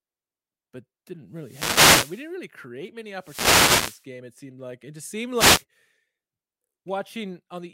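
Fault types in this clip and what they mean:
Wireless microphone noise hit: the FM radio link fades, so receiver hiss swells over the speech three times, showing as broadband smears on a spectrogram.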